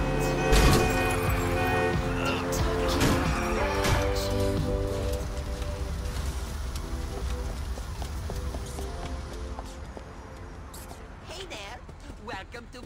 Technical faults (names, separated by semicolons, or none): none